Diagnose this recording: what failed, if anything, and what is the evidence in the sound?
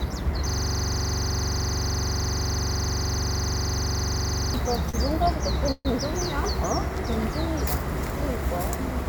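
The driver or buffer stage failed first, with a system hang loop from 0.49 to 4.54 s. A 42.67 ms chunk of sound repeats exactly, about 95 times, so you hear a rough buzz at 23.4 Hz instead of the audio moving forward. That loop length fits a 2048-sample buffer. The machine or driver stalled, and the hardware kept replaying the same ring buffer until things came back.

Next there's a short stall from a late packet at 4.89 to 4.96 s, which points at the network and jitter buffer. A packet didn't arrive on time, the buffer ran dry, and the receiver held the last bit of sound for 41 ms. Nothing was dropped. Playback just picked up where it left off, running 41 ms later than before.

Around 5.72 to 5.87 s there's a call audio freeze. The last sound gets stretched and fades out over 133 ms, dropping to 20 ms of silence before the audio resumes exactly where it stopped. No content is lost, but everything after it sits 133 ms later. 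The likely cause is packets held up in transit long enough to empty the jitter buffer, a network-stage problem again.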